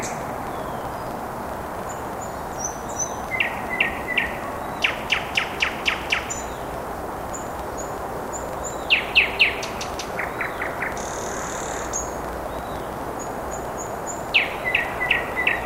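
A recording of sounds, marred throughout by a filter restarted on every block: the filter drops its internal state at each block boundary and starts again from silence, so each block opens with a transient. These repeat as a buzz at about 23.4 Hz, which fits a 2048-sample block, and the buzz rises and falls with the level of the sound. That steady, level-following rate sets it apart from buffer dropouts, which leave irregular gaps.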